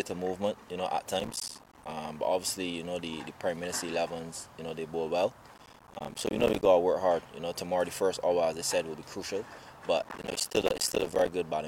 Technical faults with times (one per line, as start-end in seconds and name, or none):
1.20-1.91 processor overload crackle
5.54-6.66 processor overload crackle
10.02-11.32 processor overload crackle